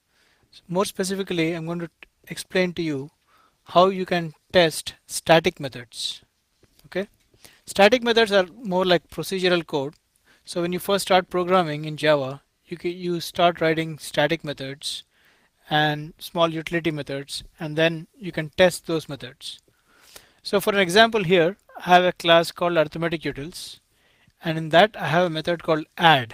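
No technical faults are audible.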